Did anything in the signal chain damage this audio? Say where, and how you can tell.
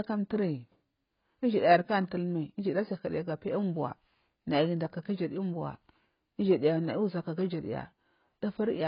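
Yes, at the codec: the speech has nothing above 5.2 kHz and sounds smeared and warbly throughout. This is likely heavy AAC compression, whose low cut-off and coarse quantisation suggest roughly 16 kbps.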